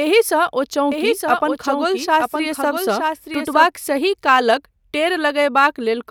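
From 0.92 s to 3.66 s a doubled audio track runs under the speech. A second full-band copy trails by about one second, roughly 5 dB quieter, with no decay or room colour. It starts and stops abruptly. Likely a slower capture path recorded it twice.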